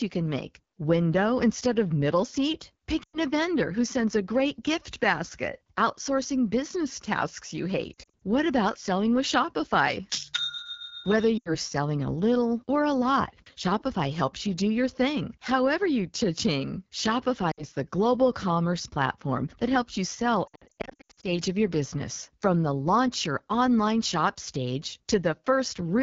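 Throughout, the AMR wideband (HD Voice) codec at 8.85 kbit/s, one of its lowest rates, makes the speech rough and raspy. This is model-based coding, not the smeared swirl of a transform codec.

Lost AMR speech frames cause dips and warbles that drop to near silence at 3.03–3.19, 7.94–8.24, 11.38–11.52, 17.51–17.64 and 20.47–21.40 s. The decoder repeats the last pitch with decaying gain, so the sound fades rather than clicking.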